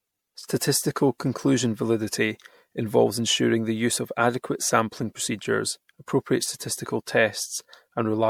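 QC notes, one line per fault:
Throughout: generation loss. The speech sounds swirly, hollow and smeared, with consonant attacks blurred, more than one lossy pass at this rate would explain. The likely cause is repeated MP3 decoding and re-encoding, around seven passes, at a rate that fits 96 kbit/s. Each pass requantises on a shifted frame grid, so noise and spectral gaps accumulate. A spectrogram shows flickering holes and smeared onsets in the upper bands, and waveform transients look softened.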